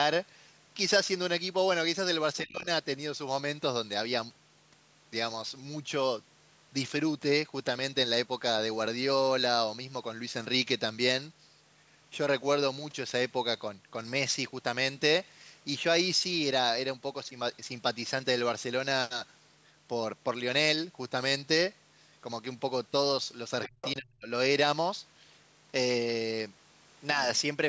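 A speech recording from a call, band-limited with nothing above 8 kHz as normal call microphone processing leaves it, with two moments where the talker's voice is pulled down. From 2.43 to 2.67 s the speech dips by roughly 25 dB for about a fifth of a second. This is speech suppressed in double talk, likely from an echo canceller that could not tell the talker apart from the far end playing at the same moment, so it attenuated everything. The waveform shows the envelope pinched to a narrow band, and the spectrogram shows that slice fading.

Between 23.64 and 23.94 s another voice leaks through, the other side's voice coming back off the loudspeaker at roughly 10 dB under the talker, likely because the echo canceller left part of it in the microphone signal. On a spectrogram it appears as a second, fainter set of harmonic stripes laid over the main ones, at pitches that do not follow the talker's.

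Overlapping that leak, from 23.67 to 24.28 s, the talker is suppressed in double talk again, far harder this time, dropping by roughly 40 dB for about half a second. In the waveform it is almost a gap, and in the spectrogram the energy falls to near silence across the band.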